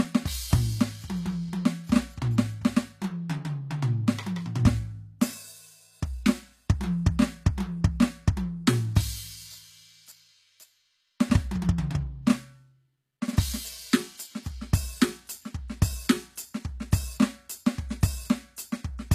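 It's a music clip, and the whole thing carries HE-AAC compression damage that's plainly audible. The top end sounds bright but synthetic, which is most likely the spectral band replication of a low-bitrate HE-AAC encode, something in the region of 24 kbps. The treble is copied up from lower bands rather than coded, so its harmonics don't line up and the highs come out gritty and metallic. Above 14.9 kHz there's nothing at all.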